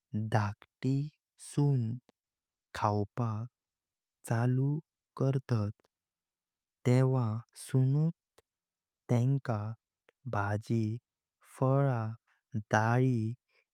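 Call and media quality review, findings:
No audible technical faults found; the speech signal stays continuous and stable across the whole clip, with no defects attributable to the capture, processing or transport path.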